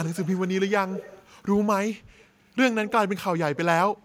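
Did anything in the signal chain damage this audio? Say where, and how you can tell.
Yes, in call processing: the far end's echo canceller likely let part of its loudspeaker pickup through, an echo leak. A faint copy trails about 180 ms behind at 0.04 to 0.49, 0.88 to 1.3, 2.17 to 2.25 and 2.87 to 2.92 s. It is clearest in the second stretch and barely audible in the third.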